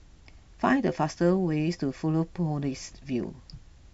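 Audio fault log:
The speech signal shows no audible technical faults at any point in the clip.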